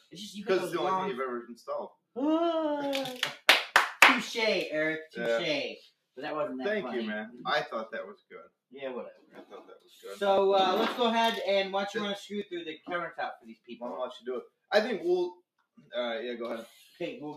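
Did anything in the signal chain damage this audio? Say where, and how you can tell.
Yes. At the call-processing stage, a noise suppressor built for speech stays on for this sound throughout. It mistakes steady tones, ambience and decaying tails for noise. Its gain keeps moving by roughly 5 dB, so attacks pass while held parts sink. The result pumps and thins.

There are also clear spots of sound cut by the noise suppressor. They fall at 1.89–2.16, 5.79–6.17, 8.14–8.54, 9.13–9.98, 13.36–13.75, 14.2–14.7 and 15.77–15.92 s. Most dip by about 18 dB. The dip is about 16 dB at 9.13 s and about 9 dB at 15.77 s. Sustained material is pulled down there, and decays are chopped short.

At the driver or buffer stage, periodic USB or driver dropouts run from 3.21 to 16.51 s. They repeat every 1.02 s. Each one skips about a millisecond of audio with no fill. You hear evenly spaced ticks over the signal. 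That fits a background task stalling the bus or driver on a timer.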